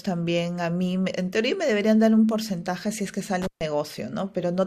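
Intermittent contact at 3.42 to 3.61 s: a loose cable or plug briefly loses its connection, so the speech drops out for about 137 ms. Crackle marks the break and the reconnection, and faint hiss remains while the line is open.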